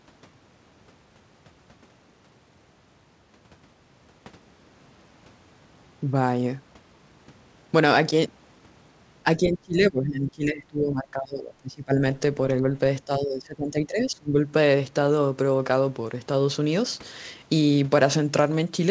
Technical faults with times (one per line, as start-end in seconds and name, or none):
9.37-12.02 speech suppressed in double talk
13.05-14.52 speech suppressed in double talk